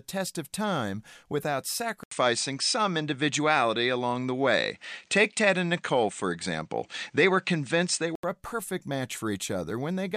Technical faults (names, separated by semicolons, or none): input switched to a poorer device